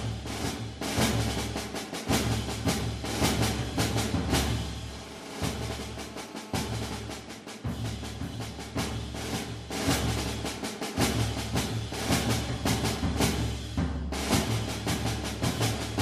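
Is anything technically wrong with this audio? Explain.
Yes. From 4.0 s to 6.97 s there is GSM phone buzz. A 2G phone was on a call nearby. Its transmitter pulses about 217 times a second. The audio circuitry picks up those radio bursts and rectifies them into an audible signal. The result is a hard, raspy buzz at about 217 Hz, thick with harmonics. It holds nearly steady, as a call does. It sits about 19 dB below the sound and bears no relation to it.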